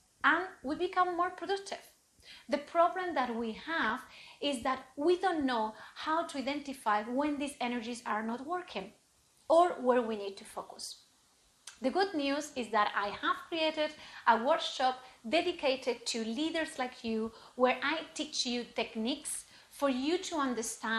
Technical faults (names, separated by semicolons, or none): DAB burbling